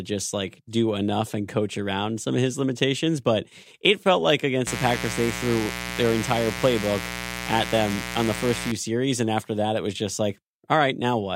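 Mains buzz runs from 4.66 s to 8.72 s in this speech clip, a steady, raspy buzz sitting about 10 dB below the speech. It is built on 60 Hz mains: sharp switching spikes from a dimmer, rectifier or unshielded line arrive twice per mains cycle, and their harmonics of 60 Hz stretch up into several kHz. That is why the buzz sounds gritty rather than like a pure low hum.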